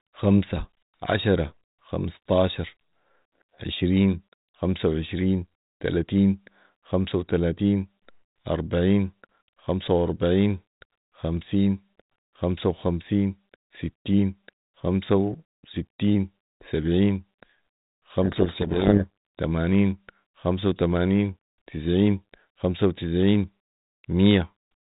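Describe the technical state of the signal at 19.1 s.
Codec payload misread, 18.22 to 19.07 s: the receiver takes the G.726 code words in the wrong bit order, burying the speech in harsh distortion until alignment returns.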